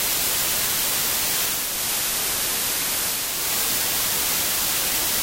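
From 1.44 to 3.54 s, digital radio blending to analogue: the receiver lost digital reception and cross-faded over 463 ms to FM, bringing faint hiss roughly 40 dB down and a level drop of about 1 dB.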